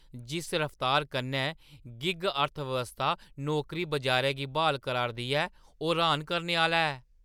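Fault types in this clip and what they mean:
No faults identified in this speech recording; nothing to report.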